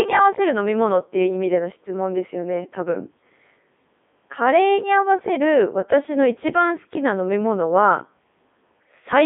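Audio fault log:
Throughout, Codec 2 vocoder: the speech sounds robotic and buzzy, with a heavily smeared, synthetic quality, a narrow band of roughly 200 Hz to 3.6 kHz, and nothing above 3.8 kHz. The codec sends only pitch, voicing, energy and a coarse spectral envelope, so the decoder rebuilds the speech from sine waves rather than the original waveform. The codec ran in its 3.2 kbit/s mode.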